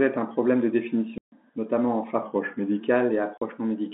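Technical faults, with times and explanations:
1.18–1.32 s and 3.38–3.41 s, packet loss filled with silence: after "un problème de", 140 ms drops out, then later 40 ms, with hard edges, consistent with 20 ms packets replaced by silence.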